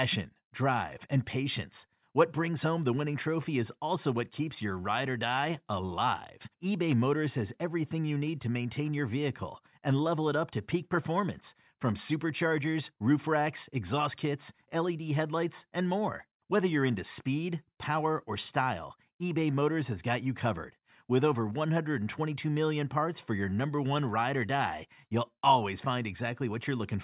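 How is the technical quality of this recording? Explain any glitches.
Nothing in this recording jumps out as a glitch, so there's really nothing to explain here.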